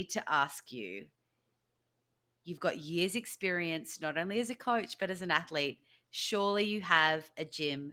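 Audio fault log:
No faults heard in this speech recording.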